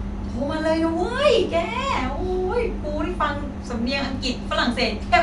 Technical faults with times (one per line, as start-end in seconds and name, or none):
none